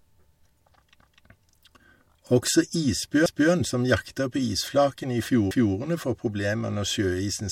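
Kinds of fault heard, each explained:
Overlapping chunks: at 3.26 to 3.51 s and again at 5.51 to 5.76 s, the speech stutters as a 250 ms stretch plays a second time. The audio was handled in 2.0 s chunks, and each new chunk began 250 ms before the previous one finished, so the overlap is heard twice at every join. The second repeat falls just before "får problemer", and the two joins sit about 2.25 s apart.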